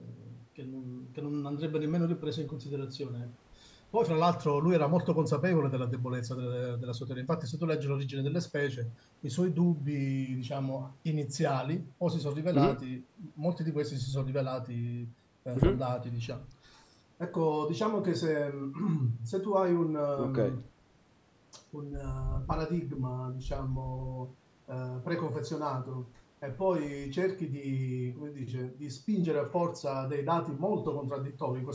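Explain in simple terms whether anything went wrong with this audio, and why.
Nothing went wrong with this speech recording. It has been through a call's microphone processing, which removes the deepest bass and anything above about 8 kHz, so it sounds a little like a phone call. That is normal for this kind of audio, not a fault.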